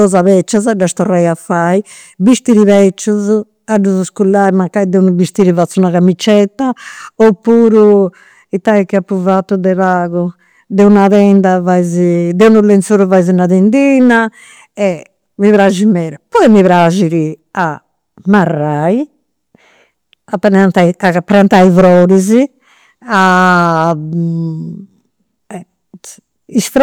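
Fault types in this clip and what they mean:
Hard clipping: the speech is driven about 8 dB past what some stage in the chain can pass, so the loudest peaks get sliced flat instead of rounding over. Only a small slice of the signal, around three percent, actually hits the ceiling, but those flattened tops throw off harmonics well up the spectrum. You hear it through the whole clip as a gritty crackle riding the louder syllables.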